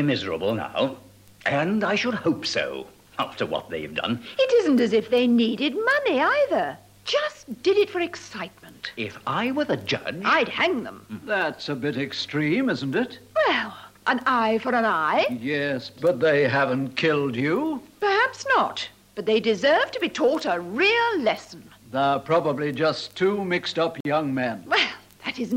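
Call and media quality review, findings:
Dropout at 24.00–24.05 s: about 47 ms of silence, then audio resumes. Likely a Bluetooth stall. Interference delayed packets, headset buffer emptied, playback halted until retransmissions arrived. Component: wireless link to headphones.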